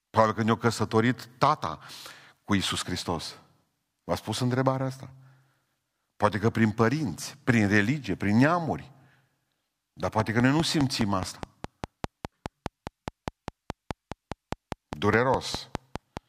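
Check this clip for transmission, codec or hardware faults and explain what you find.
One hardware-type fault is present: a train of clicks from 10.20 s to 16.18 s. Something in the chain, likely interference from nearby equipment or a faulty connection or power supply, injects a short pulse about 4.9 times a second at a steady, regular spacing, some thirty in all. Each click has much the same shape and peaks roughly 15 dB above the speech, so the ticking sits clearly on top of the talking and carries on through the pauses.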